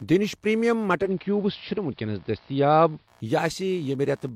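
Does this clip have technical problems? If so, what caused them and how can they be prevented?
Yes. Computer activity noise runs through the whole speech clip: a buzzy pulsing at roughly 70 Hz, well below the voice, as processor or mouse load shifts the shared ground of the audio circuit. Isolating the audio interface's ground, for example with a ground-loop isolator or USB isolator, prevents it.

From 0.98 s to 3.13 s the digital radio blends to analogue AM over a 128 ms cross-fade and back. During that span the level drops about 1 dB, and hiss rises to around 40 dB below the speech. Stronger digital reception, through a better antenna or placement, avoids the blend.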